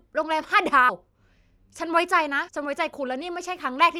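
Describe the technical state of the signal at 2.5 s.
At 2.47 s the decoder skipped compressed frames: a run of whole frames never reached the output, either missing from the stream or rejected as damaged. The jump removes roughly 150 ms of speech, which fits about five frames of 26.1 ms each. At the splice the speech lurches abruptly forward.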